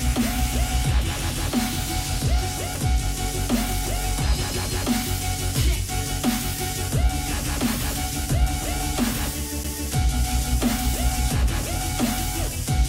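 At 9.64 s there is a near-instant dropout, just under a hundredth of a second, and the sound resumes abruptly from a different point, with no smooth join across the gap. This is a CD skip. A knock or a surface flaw knocked the laser off its track and onto another turn of the disc's spiral. The player muted briefly while it relocked, then carried on from the new position.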